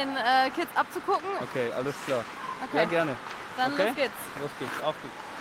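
No technical fault can be heard at any point in the audio, and the signal stays intact and steady throughout.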